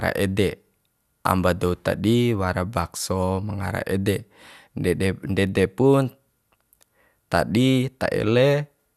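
Speech recording, no technical faults audible anywhere in the clip.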